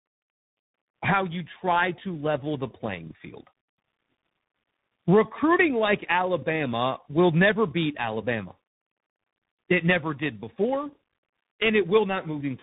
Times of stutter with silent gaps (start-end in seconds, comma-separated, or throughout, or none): none